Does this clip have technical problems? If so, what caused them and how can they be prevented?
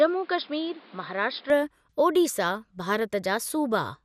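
Yes. Throughout, the speech sounds dull, with a gurgling, granular roughness as upper bands flicker in and out. This is likely MP2 compression starved of bits, consistent with a rate around 80 kbps. Encode at a higher bitrate, or use a more efficient codec such as AAC or Opus.

From 0 to 1.5 s, the speech is boxier, with nothing above 5.2 kHz and extra background noise about 30 dB below it. It then opens up with no gap and no level jump, likely because the input switched to a poorer device. Lock the recording input to one microphone and disable automatic device or headset-profile switching before recording.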